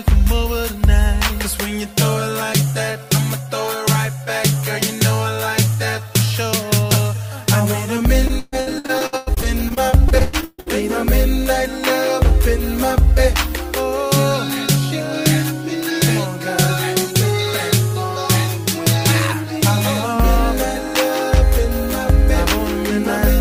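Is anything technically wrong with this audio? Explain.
Yes. From 8.27 to 10.70 s there is repeated packet loss with a robotic sound. Gaps as long as 139 ms recur in quick succession, each patched by extending the previous sound, so about 38% of the stretch is concealed. The result is choppy audio with pieces missing.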